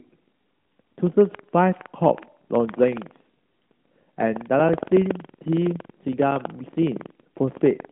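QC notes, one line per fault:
throughout, buffer tearing: the program filling the playback ring buffer and the hardware draining it have slipped out of step and cross inside every period, so a few percent of each buffer carries audio from roughly 150 ms earlier, joined with hard edges. The speech gains a steady robotic rattle at 21.5 Hz, which fits a 2048-sample buffer, and it stops in pauses. The waveform shows evenly spaced step discontinuities. The spectrogram shows thin vertical streaks across the 150 Hz to 3.5 kHz phone band.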